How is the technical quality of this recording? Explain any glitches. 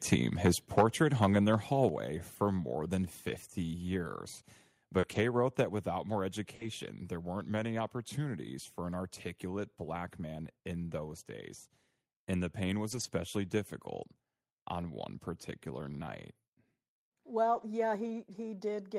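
The recording has several audible glitches: distortion and level drops in the first two seconds, then transmission damage scattered through the rest of the speech.

Microphone overload occurs at 0.78 to 0.84 s (about 9 dB over), 1.22 to 1.26 s just before "in their" (about 5 dB), and 1.83 to 1.86 s (about 1 dB). The likely cause is input gain set too high, so peaks hit the converter ceiling and their tops are flattened. That gives a harsh crackle on the loudest moments, worst in the first burst, where roughly a tenth of the samples are clipped.

The microphone volume stepped down at 0.81 s (about 4 dB) and 1.89 s (about 5 dB). This is likely automatic gain control reacting to the clipping just before it. Unlike the crackle, it is a clean, sudden drop in both voice and background level that then stays lower.

A lost packet rebuilt from error correction appears at 4.17 to 4.19 s, 5.03 to 5.17 s, 6.59 to 6.69 s, 12.91 to 13.05 s, 14.79 to 14.81 s just before "one particular night", and 17.53 to 17.63 s. 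Each stretch runs 20 to 80 ms. The decoder played a low-bitrate backup copy instead of the missing audio, so nothing drops out, but those moments sound grainier and noisier.

Short concealed packet loss occurs at 4.99 to 5.05 s and 6.55 to 6.61 s, between "without more" and "there weren't many opportunities". Here 40 ms of audio never arrived and had no backup copy, so the receiver extended the preceding sound to fill the gap. The result is a brief smear or wobble rather than graininess. In both places, rougher rebuilt audio follows immediately.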